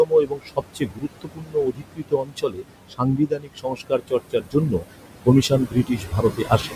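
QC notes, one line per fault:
Throughout: noise suppressor artifacts. The room noise, sitting only about 9 dB below the speech, is pulled down by about 21 dB in the gaps and rises again each time speech starts, so the background pumps with the phrasing. The suppressor decides band by band and frame by frame what counts as steady noise.
0.05–2.65 s, 2.9–4.85 s and 5.49 s to the end: speech cut by the noise suppressor. In each span the suppressor took quieter parts of the speech for background and lowered them with it, by about 22 dB at worst in the first two spans and about 19 dB in the last. Roughly two seconds, one second and under a second of speech are affected, so soft consonants and word tails sound swallowed or faint.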